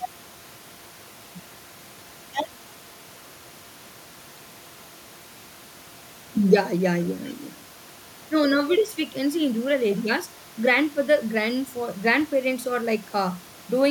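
Nothing here points to a technical fault: the background noise is just the room the microphone sits in, and the change in level at around six and a half seconds is the talker shifting closer or further away.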